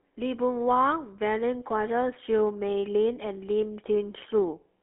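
From the first moment to the end, the speech carries the buzzy, gravelly roughness of the GSM full-rate codec, and it is plainly audible. The coder rebuilds the vocal tract as a filter driven by a regularly spaced pulse train, discarding most of the excitation detail, which fits a 13 kbps full-rate coder. On a spectrogram, energy sits between about 300 Hz and 3.4 kHz with nothing above, and harmonics look smeared and grainy rather than clean.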